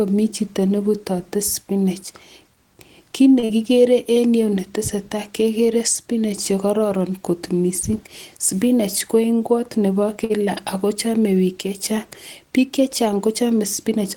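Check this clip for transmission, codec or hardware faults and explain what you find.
Three network faults are audible in this speech, two of one kind and one of another, with the first pair back to back.

Short stalls from a late packet occur at 3.39–3.45 s and 10.24–10.32 s. Each time a packet had not arrived when due, so the jitter buffer ran dry. The receiver stretched the last sound, for 33 ms and then 53 ms, and resumed from the same point once the packet came. The held sound carries a slight buzz or dip. Nothing is lost, but the rest of the speech shifts later by those amounts, which separates a stall from a loss.

A short concealed packet loss follows at 3.45–3.51 s, just before "kigere en yu". About 40 ms never reached the decoder. The receiver filled the gap with 41 ms synthesised from the preceding sound and blended back in. The result is a brief smear or wobble. Unlike the stall just before it, real audio is missing here, so a short consonant can disappear instead of being delayed.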